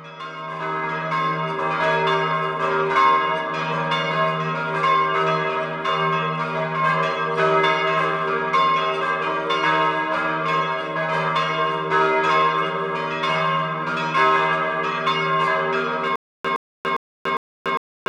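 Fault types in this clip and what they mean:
Stutter with silent gaps: from 16.16 s to the end, one 116 ms fragment returns four times every 404 ms, with 289 ms of digital silence between repeats. This is likely a stalled stream replaying its last buffer at each retry, so the intended audio is lost.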